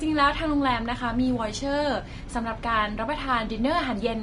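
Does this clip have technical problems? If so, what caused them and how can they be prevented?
Yes. Throughout, the speech was likely encoded with Vorbis compression at a bitrate that sounds close to 33 kbps, so nothing survives above 10.6 kHz and the treble turns hissy and grainy. Encoding at a higher Vorbis quality setting, or keeping a lossless master, prevents this.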